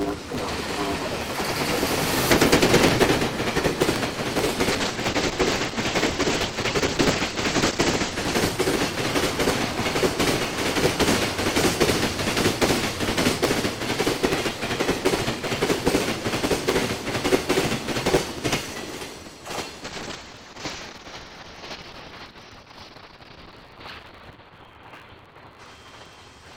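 From start to finish there's a steady 109 Hz buzz, and everything runs about 1.16 times too fast at roughly normal pitch. That's a block size mismatch (truncated): the end of each block, which fits 512-sample blocks being written, gets dropped before the next stage reads it.

Then at 4.74 s a call bitrate drop hits. The sound goes rough and muffled, with the top end falling from 20 kHz to 8 kHz. That fits the encoder being squeezed from around 128 to 9 kbps, and it bottoms out for about 3.7 s before recovering at 10.55 s.

A second, deeper bitrate drop starts at 19.85 s and runs to the end. Bandwidth shrinks to 6 kHz, pointing to roughly 6 kbps, and it sits at its worst for about 4.9 s, so it's even more watery and dull.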